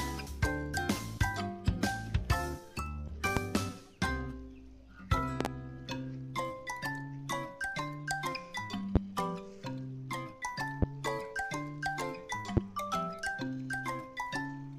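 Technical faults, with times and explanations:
3.37–3.40 s, 5.41–5.48 s, 8.96–8.99 s, 10.82–10.86 s and 12.57–12.60 s: loud pop. Each is a sharp pop standing roughly 25 dB above the sound, which continues underneath, with a double pop at 5.41 s. The cause is likely a sudden voltage step or pulse, from a plug, switch, static or driver glitch, shaped by the following circuitry.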